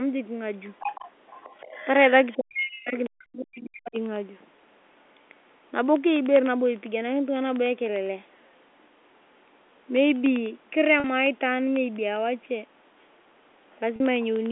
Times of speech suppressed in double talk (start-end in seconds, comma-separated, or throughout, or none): 2.37-3.99